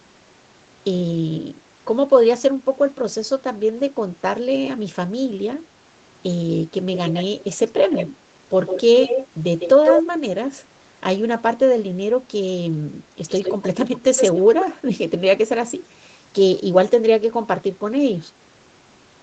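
A speech recording carrying an echo leak. A delayed copy of the voice trails the speech at 6.93–7.56, 7.77–8.15, 8.66–8.82, 9.01–9.28 and 9.59–10.03 s. There it lags by 153 ms. It returns at 13.28–13.87 and 14.16–14.42 s, lagging by 112 ms. Its level runs from well below the speech to slightly above it, near 9.6 s. The likely cause is a loudspeaker at the far end, whose echo canceller let its microphone pickup through.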